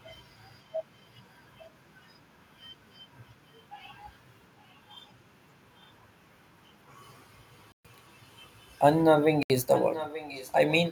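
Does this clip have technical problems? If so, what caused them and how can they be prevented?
Yes. There are two short dropouts to silence, at 7.72 to 7.85 s (about 125 ms) and 9.43 to 9.50 s (about 71 ms), with the sound resuming afterwards. That's likely a Bluetooth stall: interference held up packets, the headphone buffer emptied, and playback waited for resends. Keeping the phone close, with a clear line to the headphones and away from busy 2.4 GHz gear, avoids it.

From 9.68 to 10.74 s there's a delayed copy of the speech trailing the original by about 0.86 s, sitting roughly 10 dB under it. It's probably an echo leak, where the far end's loudspeaker audio got back into its mic and past the echo canceller. A headset on that side, or lower speaker volume, prevents it.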